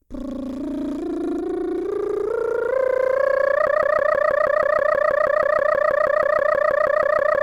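From 3.67 s to the end, the music locks into a stuttering 160 ms fragment that repeats exactly, back to back, 24 times. It is a broken-record loop, likely from the player or stream stalling and resending its last buffered piece, so the intended audio is lost.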